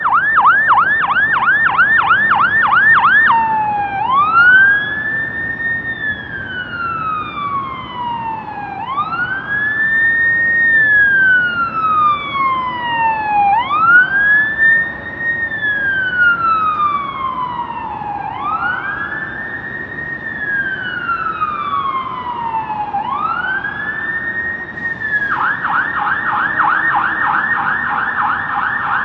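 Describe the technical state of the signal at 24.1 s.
At 24.1 s the sound runs intact, with no dropout, distortion or other fault at that moment.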